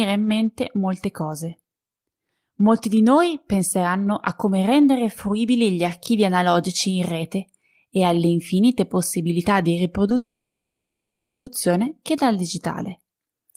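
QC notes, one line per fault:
10.16–11.49 s, call audio freeze after "alle infinite possibilità di": likely jitter-buffer underrun; last sound smears, then about 1.2 s flat silence band on spectrogram, speech resumes intact, delayed.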